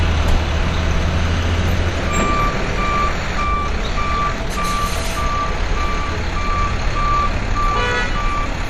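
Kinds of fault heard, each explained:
MP2 compression: Nothing is left above 15.2 kHz, and the sound throughout is dull, with a plainly audible gurgling, granular roughness, which points to likely MPEG Layer II coding at a starved rate, fitting about 64 kbps. Too few bits switch upper sub-bands off and leave the rest coarsely quantised. Unlike a plain low-pass filter, which removes treble smoothly and cleanly, this carries grainy distortion in the bands that remain.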